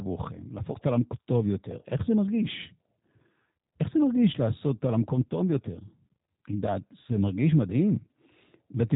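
G.729 codec damage runs throughout the speech. The codec rebuilds each 10 ms frame from a vocal tract filter, a pitch estimate and a few pulses, giving plainly audible rough, synthetic voicing, and nothing passes above 3.8 kHz, which fits an 8 kbit/s G.729A stream.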